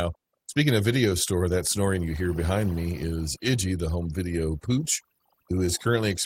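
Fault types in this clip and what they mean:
Overdone noise removal: a noise reduction process set too strong, pulling single frequency bands down or out whenever their level sits near its noise estimate, and taking low-level parts of the speech along with the noise. Throughout the clip the background drops away and breaks into twinkling, warbling specks. On a spectrogram the noise floor shows as scattered isolated dots and blank gaps rather than an even haze, and the waveform's pauses look sparse and uneven.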